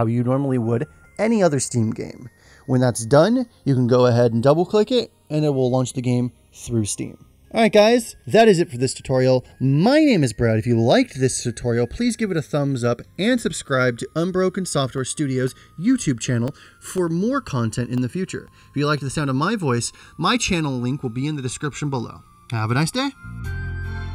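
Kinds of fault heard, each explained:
Channels drifting apart: separately clocked channels, roughly 30 ppm off, slide toward about 1 ms delay; summed to mono, comb notches sweep slowly across the spectrogram like flanging.
Periodic USB or driver dropouts: every 0.5 s from 14.98 to 18.98 s, around ten half-millisecond silent gaps tick; waveform shows brief flat breaks, spectrogram thin vertical lines.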